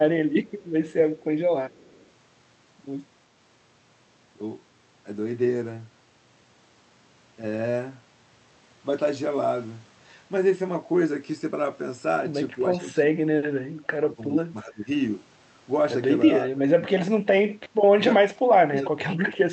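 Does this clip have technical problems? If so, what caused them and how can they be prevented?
Yes. An echo leak appears from 0.45 to 1.24 s and from 1.7 to 2.06 s: a faint copy of the speech, roughly 35 dB down, trailing it by 327 ms. This is likely a far-end loudspeaker whose echo canceller let some of its microphone pickup return. Unlike room reverberation, the copy is a distinct, fixed-delay repeat rather than a smooth decay. Prevent it with headsets or better-tuned echo cancellation.

Speech suppressed in double talk occurs at 12.59–13.09 s, 13.68–14.88 s, 16.4–17.52 s and from 17.94 s to the end. The speech level falls by about 15, 20, 25 and then 30 dB while the other side talks. The likely cause is an echo canceller that mistook the overlap for echo. Packet loss would produce abrupt gaps instead of these level dips. Prevent it with a canceller that handles simultaneous speech more gracefully.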